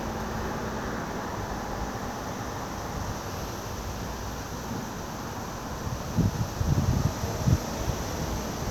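The recording of everyday sounds shows no technical faults anywhere in the signal.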